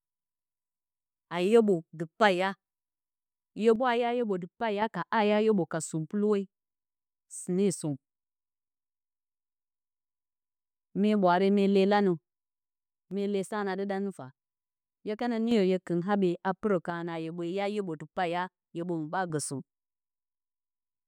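One stereo channel likely drops out, so the mono sum loses that side's contribution: the speech falls abruptly by about 6 dB, and anything present only in that channel vanishes. It happens from 3.76 to 4.82 s, 13.11 to 15.51 s, and 16.9 to 19.3 s.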